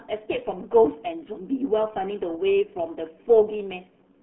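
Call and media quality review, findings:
RealAudio 14.4 codec, entire clip. Speech passed through low-rate dial-up-era coding, consistent with roughly 8 kbit/s. Band held near 200 Hz–3.5 kHz, nothing above 3.8 kHz. Heavy codec damage: muffled, gargly speech.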